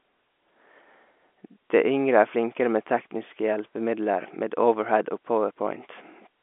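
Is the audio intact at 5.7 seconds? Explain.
Yes, the audio is intact at 5.7 seconds, with the G.711 telephone coding passing the speech in its usual narrow band and no fault at that moment.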